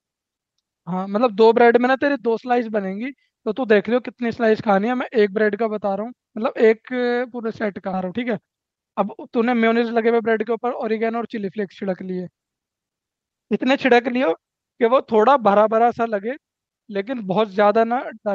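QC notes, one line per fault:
7.93 s, skip ahead: playback lurches forward with no gap, and roughly seven-tenths of a second of speech is missing, with the two sides butted almost directly together. Later audio was already queued when this stretch went missing, either lost in transit or discarded when the jitter buffer overflowed, so the receiver played on from the next available audio. That abrupt splice is why the speech sounds clipped mid-flow rather than paused.
8.03–10.58 s, jitter buffer speed-up: right after the jump, speech runs at about 114% speed while the pitch stays unchanged, sounding hurried and slightly compressed. The buffer was holding more audio than its target, so the receiver repeatedly cut out short slices of one or a few pitch periods, roughly 400 ms in total, to bring the delay back down. Because whole periods are removed, the timing tightens but the pitch does not rise. 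This clip arrives over an Opus call path limited to 8 kHz bandwidth.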